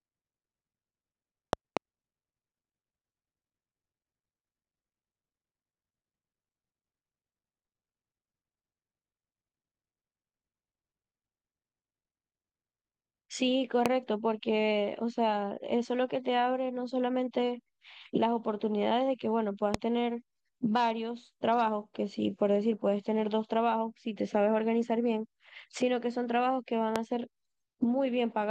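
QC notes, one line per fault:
1.53–1.79 s, loud pop: a pair of sharp pops in quick succession, peaking about 20 dB over the speech, which carries on underneath. Sounds like a voltage spike, likely a plug or switch glitch, getting into the chain and then shaped by the circuits after it.
13.86–13.88 s, 19.74–19.77 s, 26.96–26.98 s, loud pop: single pops, each only about 20 ms long and about 20 dB above the speech. The speech carries straight through each one.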